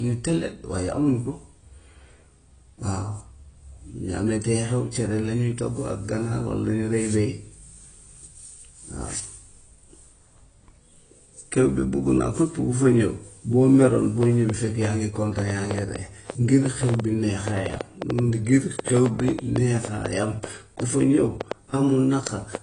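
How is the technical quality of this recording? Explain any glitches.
The recording has two clear technical problems: plainly audible lossy-codec damage throughout the speech, and a burst of clicking over the last third.

AAC compression affects the whole clip. Nothing is present above 9.7 kHz, so the speech sounds dull, and the plainly audible smearing and fizzy sibilants fit a low bitrate around 24 kbps. The likely cause is an AAC-LC encoder removing the top band and coarsely quantising what remains.

A train of clicks runs from 14.23 s to 22.56 s. About forty similar pulses arrive at roughly 4.5 per second with irregular spacing, peaking around 10 dB above the speech, so they tick audibly over it. The likely source is electrical interference or a faulty connection or power supply.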